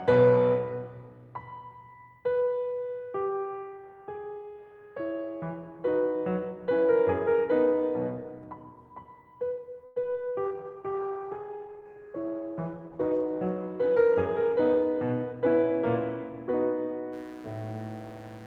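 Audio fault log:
9.85 to 9.98 s, call audio freeze: the music stalls for about 0.1 s and the last sound is stretched into a fading buzz, then resumes exactly where it stopped. Nothing is lost, unlike packet loss; the likely cause is late packets draining the jitter buffer.
10.02 to 10.05 s and 10.13 to 10.16 s, short concealed packet loss: each event loses about 20 ms of music. The receiver fills the gap by extending the preceding sound and blending back, which leaves a brief smear or wobble. Unlike the freeze just before, these drop material rather than pausing.
10.46 to 15.42 s, call bitrate drop: the encoder falls from 32 to 15 kbps and stays at its lowest for about 2.9 s. The coarser coding and trimmed treble make the music rough and muffled. The pitch stays intact, so this is not a speed change.
13.81 to 15.80 s, jitter buffer speed-up: during the low-bitrate stretch, the receiver cuts tiny pitch-period slices to shed roughly 150 ms of backlog. 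The music runs about 6% fast at unchanged pitch, so the tempo visibly pushes ahead. This differs from the dulling caused by the bitrate drop.
17.13 to 18.47 s, mains buzz: a steady, raspy 60 Hz buzz sits about 25 dB below the music until the end. Sharp switching spikes spread its harmonics up to several kHz, which gives the rasp a plain hum lacks. Unlike the freeze's fading buzz, it does not decay.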